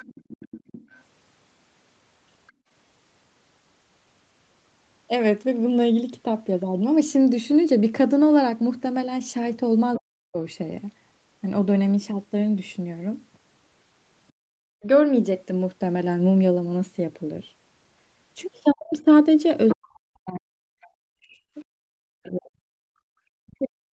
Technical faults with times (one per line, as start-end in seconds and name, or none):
0.00-2.52 other side's voice leaking through
2.52-2.69 background gated by the echo canceller
9.96-10.00 other side's voice leaking through
9.97-10.38 speech suppressed in double talk
14.32-14.50 background gated by the echo canceller
14.78-14.86 speech suppressed in double talk
18.73-23.80 speech suppressed in double talk
18.91-22.29 other side's voice leaking through
23.08-23.92 background gated by the echo canceller